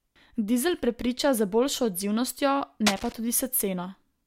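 Cable scratch noise runs from 2.86 to 3.13 s: dense, ragged bursts of scratching sit over the speech at roughly 5 dB below it. This is likely a worn cable or connector being moved, its contact resistance fluctuating rapidly as it shifts.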